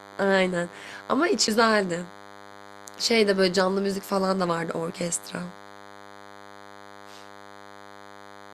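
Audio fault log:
Throughout: DECT cordless phone buzz. A steady, thin buzz at 100 Hz with a dense stack of harmonics sits roughly 20 dB below the speech. It comes from a nearby DECT handset or base sending a radio burst every 10 ms, which the audio circuitry rectifies into sound.
1.47 s: CD skip. A dropout of about 7 ms, and then the speech jumps abruptly to a different point. A knock or a disc flaw made the laser jump onto another turn of the disc spiral, so the player muted briefly and resumed playback from a displaced position.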